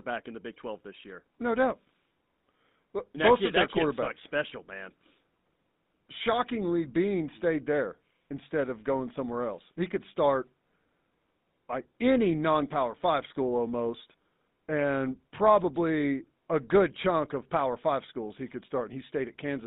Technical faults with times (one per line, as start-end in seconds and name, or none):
0.00-19.67 GSM full-rate codec